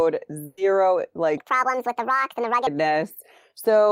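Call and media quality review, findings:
Burst of packet loss, 0.45–0.59 s: speech held and faded for 120 ms, then resumes with 120 ms absent. Network path dropping consecutive packets; receiver concealment extends last frame and fades it rather than leaving silence.

Section at the wrong speed, 1.38–2.67 s: speech runs 1.64 times fast, pitch raised about ten semitones, hurried and high. Speed and pitch shift together, likely a resampling or playback stage running this segment against a mismatched clock.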